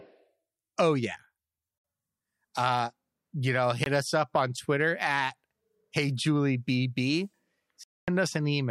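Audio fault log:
1.78–1.84 s, 3.84–3.86 s, 7.83–8.08 s: Bluetooth dropout. The speech cuts to silence for 61, 20 and 244 ms, then resumes further along as if it had kept playing. Likely cause: wireless packets missing their delivery deadline.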